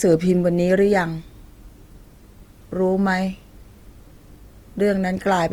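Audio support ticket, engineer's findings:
Grainy, rough speech throughout. Likely Opus compression in CELT mode, bands noise-filled, fits about 24 kbps. Spectrogram: filled to 20.1 kHz, noisy smeared texture, few holes.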